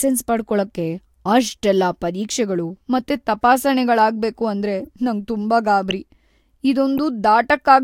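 Corrupt frames are decoded at 2.96–3.00 s, just after "ಪಡ್ಕೊಳಕ್ಕೆ ಅಷ್ಟೆಲ್ಲಾ ಪರೀಕ್ಷೆಗಳು", then at 4.80–4.87 s, 5.91 s and 6.98 s. Flipped bits misplace energy across frequencies. Each is a brief chirp or blip. The one at 5.91 s is loudest, peaking around -5 dBFS.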